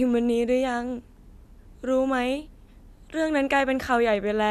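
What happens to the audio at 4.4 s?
Nothing goes wrong at 4.4 s; the speech carries on intact through that moment, with no dropout, click or other audible fault.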